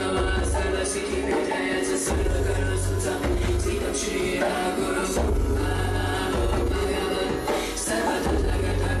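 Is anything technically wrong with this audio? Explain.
Yes. From 3.27 to 3.55 s there is DAB burbling. Bit errors at roughly 0.15 percent slip past error correction into the MP2 data; corrupted samples put short blips of noise in single sub-bands, and corrupted scale factors make sub-bands jump in level. It spans about a dozen damaged frames.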